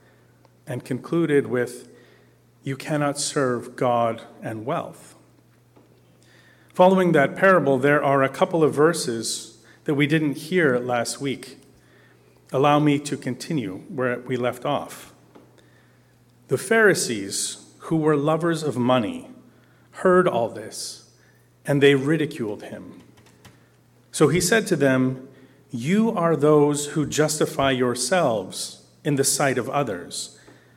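No audible faults turn up anywhere in the clip.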